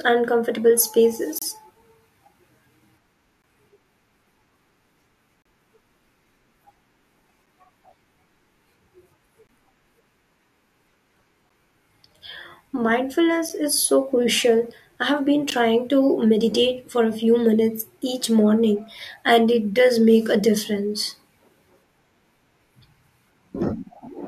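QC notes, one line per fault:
1.39–1.42, 3.42, 5.42–5.45, 7.46, 9.47, 11.49, 13.49 and 15.50 s: gaps between stream segments. Hard-edged silent holes of about 7 to 33 ms, recurring every 2 s, the last just before "to meditate for a". The regular spacing points to 2-second segments whose timestamps leave small gaps that the player fills with silence. No speech is lost.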